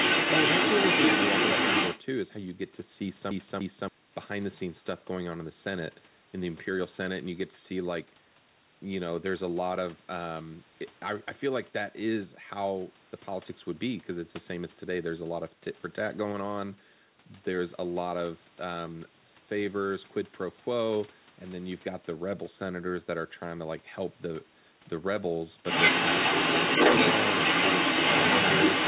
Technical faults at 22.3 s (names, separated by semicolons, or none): none